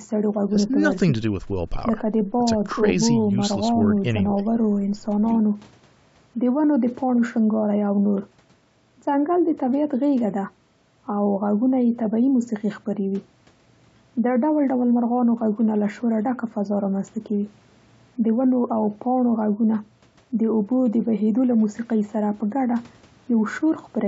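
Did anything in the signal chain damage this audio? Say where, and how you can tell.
No, nothing in the signal chain damaged this speech. The call microphone processing is audible only as the usual trimming of the lowest bass and a top end that stops at 8 kHz, both expected from that stage.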